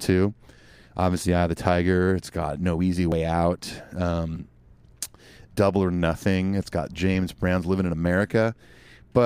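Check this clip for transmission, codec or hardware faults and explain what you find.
The speech jumps twice, at 3.12 s and 4.36 s, each time with a small skip forward where about 20 ms of sound goes missing with no gap. This is likely a dropped buffer (overrun): samples were overwritten before being read, and the remaining audio was spliced together.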